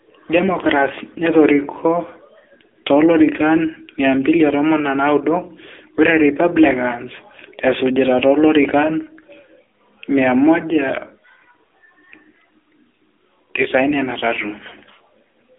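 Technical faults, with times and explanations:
Throughout, AMR narrowband mobile codec: the speech sits in a phone-line band of roughly 250 Hz to 3.6 kHz, with nothing above 3.7 kHz. The codec rebuilds each 20 ms frame from a vocal-tract model and sparse pulses. At about 7.95 kbps this leaves a plainly buzzy, synthetic edge.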